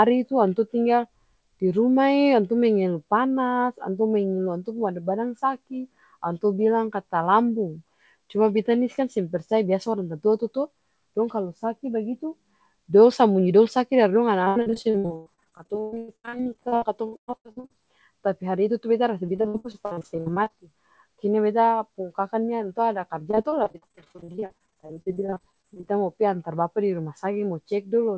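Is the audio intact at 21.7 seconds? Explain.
Yes, the speech is intact at 21.7 seconds, passing cleanly through the call's G.722 path, with the expected absence of content above 8 kHz.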